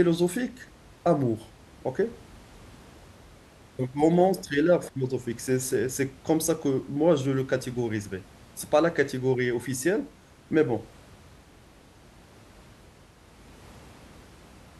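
Nothing stood out on listening to this speech recording, with only faint room noise sitting about 26 dB below the speech.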